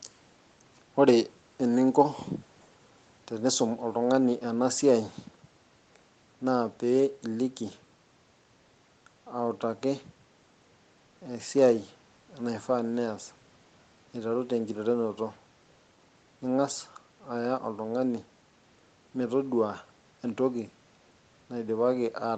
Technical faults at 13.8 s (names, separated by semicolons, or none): none